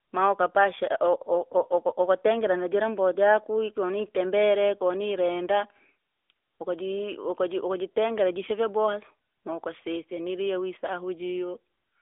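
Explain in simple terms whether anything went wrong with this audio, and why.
Throughout the clip the speech sounds thin, boxy and audibly buzzy, like an old phone call, with nothing above about 3.7 kHz. That is the AMR narrowband mobile codec, which squeezes the voice into a narrow phone band and rebuilds it from a simplified model.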